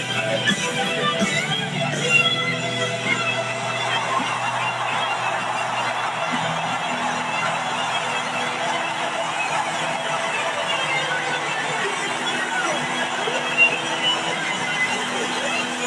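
No technical faults can be heard anywhere in this audio. Nothing in it points to a problem with how it was captured, processed or played back.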